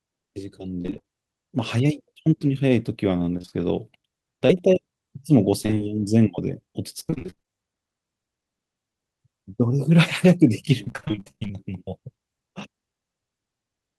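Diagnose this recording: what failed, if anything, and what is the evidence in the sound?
Repeated packet loss (robotic sound), a network fault, at 0.81–1.05, 3.37–3.53, 5.63–5.82, 7.00–7.49 and 10.84–11.51 s. About half of each stretch is patched by extending earlier sound, with gaps up to 29 ms. The spectrogram shows smeared, repeating harmonic blocks.

Short concealed packet loss, also network, at 4.47–4.51 s. About 20 ms was lost and filled from the preceding sound, leaving a brief smear. It appears as a flattened, stretched spectrogram patch.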